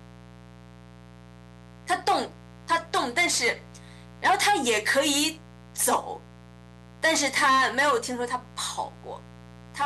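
Throughout the clip, something in the signal chain, such as a dimmer, a rectifier or a missing shield, is letting sharp switching spikes from the 60 Hz mains into the audio, two in each cycle. That is mains buzz: a dense stack of 60 Hz harmonics reaching up to several kilohertz, sitting roughly 25 dB below the speech. It sounds like a steady, raspy buzz that never lets up.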